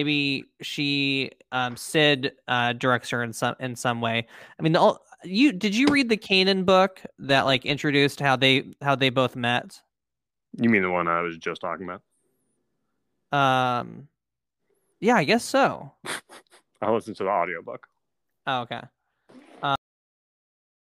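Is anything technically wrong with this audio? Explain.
Yes. The speech has a cut-off end at 19.76 s. The final stretch of audio was never written out or played, so the sound halts partway through rather than finishing, and digital silence fills the remaining 1.1 s to the end of the clip. There is no natural decay or room tail. On a waveform the signal stops abruptly and gives way to a flat line. On a spectrogram all energy vanishes along a sharp vertical edge at that point.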